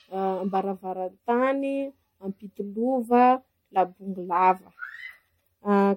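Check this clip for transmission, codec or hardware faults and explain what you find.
One codec fault runs throughout. Generation loss: the speech was likely re-encoded as MP3 about seven times, each pass requantising on a shifted frame grid. The result sounds swirly, hollow and smeared, with blurred attacks and nothing above 16.5 kHz, consistent with a 64 kbit/s setting.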